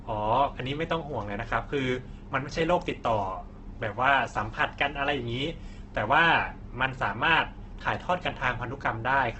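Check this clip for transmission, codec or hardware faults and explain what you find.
There's one problem, running the whole length of the speech: likely Opus compression. The top end stops dead around 8.2 kHz, and the tone is grainy and rough rather than swirly. That's what you get when the encoder, starved at a very low bitrate near 12 kbps, refills the bands it can't afford with folded-up lower content and noise.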